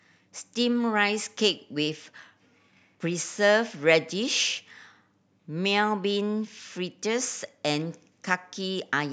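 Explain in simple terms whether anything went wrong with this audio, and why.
Nothing went wrong with this audio, because no fault can be heard anywhere in the speech.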